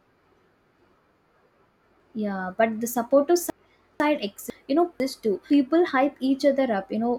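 Speech, with chunks out of order in two places. From 2.0 to 4.0 s, one 500 ms chunk plays three chunks late. From 4.5 to 5.5 s, another 500 ms chunk plays one chunk late. Nothing is missing, but the sequence is wrong. Each spot sounds jumbled and garbled. There are three hard joins at each spot. A late-arriving chunk was written after the ones that should follow it.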